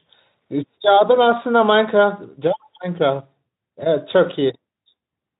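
No technical faults are audible.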